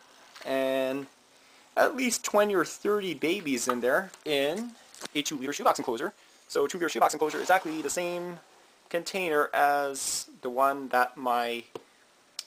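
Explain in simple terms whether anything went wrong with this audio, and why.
From about 5.05 to 8.1 seconds the audio suddenly hurries along at roughly 1.75 times its normal pace, sounding rushed, yet the pitch stays where it was. That is a time-stretched section. The likely cause is software squeezing that stretch to fit a shorter length, keeping the pitch steady by cutting out tiny slices of sound and joining the rest back together, which is what gives it that hurried feel.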